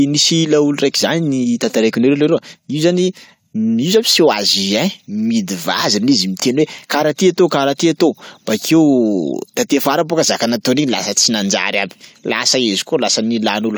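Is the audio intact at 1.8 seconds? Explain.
Yes, at 1.8 seconds the speech plays through intact, with no dropout, click, distortion or other fault to be heard at that point.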